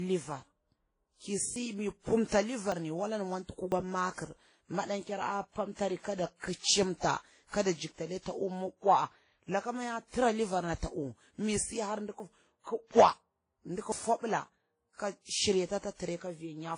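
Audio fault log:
throughout: transcoding between lossy codecs. The speech sounds dull and smeared, with two different kinds of codec artefacts heard together. This is likely a chain of low-rate lossy encodes, consistent with WMA at around 32 kbit/s, then Vorbis near 26 kbit/s, then WMA again at about 48 kbit/s. Each later pass coded the earlier damage and added its own, and the lowest cut-off in the chain remained.
1.56, 2.72, 3.72, 12.2, 13.92: dropped buffer (overrun). Each is a jump, with the speech skipping abruptly ahead, with no gap of silence. The 1.56 event falls just before "mu pumta", 2.72 between "mu pumta" and "ni wala ni mwanti", and 12.2 just after "ta uwu mi si". About 40 ms goes missing at each of the first four, and roughly 70 ms at 13.92. The likely cause is the recording program failing to collect its samples before the hardware overwrote them, so the audio on either side of the lost piece is spliced directly together.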